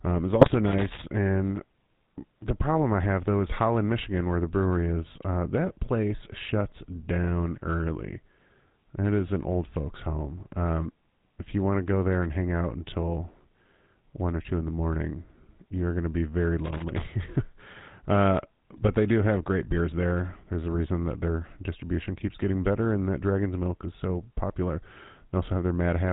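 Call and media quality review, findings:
GSM full-rate codec, whole clip: buzzy, gravelly speech, band stops at 4 kHz, damage plainly audible. Fits 13 kbps GSM full rate. Pulse-driven vocal-tract model keeps only sparse excitation, so the fine voice texture turns rough and buzzy.

GSM bit errors, 0.41 to 0.56 s right after "um is", and 20.74 to 20.81 s just before "that their distribution keeps": squawky, gargled bursts over a few frames. Corrupted filter, pitch and gain values warp the spectrum and level.

Loose connector crackle, 0.67 to 1.02 s and 16.65 to 17.03 s (the second right after "going to be very"): irregular scratchy crackle. A worn or dirty contact making and breaking chops the signal.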